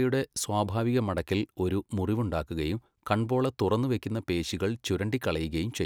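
Two sharp, isolated clicks cut through the speech, one at 0.81 s and another at 4.52 s, each a single instantaneous tick with nothing audibly missing around it. The likely cause is dropped samples: a tiny fraction of a millisecond of the stream went missing at each point, so the waveform leaps abruptly to a later value. That discontinuity shows as a thin vertical line across the spectrum and is heard as a click.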